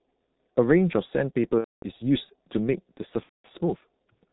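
From start to finish the speech sounds muffled and hoarse, with nothing above 4 kHz and consonants smeared together. This is the G.723.1 codec running at 6.3 kbit/s. It codes the signal in 30 ms frames with a slowly updated model of the voice, so it keeps only the broad shape of each sound and discards fine detail. Here the damage is heavy.

From 1.59 to 1.83 s the sound is stretched out and fades in level. The same thing happens from 3.23 to 3.47 s. Both are VoIP packet loss concealed by the speech codec. The gaps last about 240 ms and 210 ms, which fits runs of roughly eight and seven lost 30 ms frames. With no packets arriving, the decoder repeated its last pitch and filter and turned the gain down a little with each frame. Because every frame is decoded from the one before, the speech stays thin and distorted for a short while after each gap closes.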